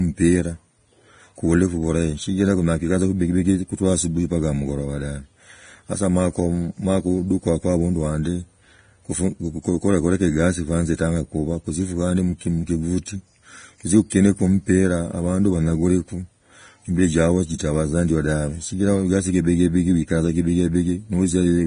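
From start to finish the speech carries heavy codec damage, likely from Vorbis compression at a low bitrate. Nothing is present above 9.7 kHz, and the remaining treble turns grainy and hissy. Unlike a plain low-pass filter, the damage adds noise-like roughness rather than simply dulling the sound.

Pre-echo occurs at 13.06 s and again from 14.10 to 14.12 s. The coding noise meant for a sharp onset spreads backward into the quiet moment just before it, by 18 ms and 20 ms respectively. Each attack is preceded by a brief hiss and sounds smeared. This differs from a click, because the noise builds up ahead of the onset instead of appearing as an isolated spike.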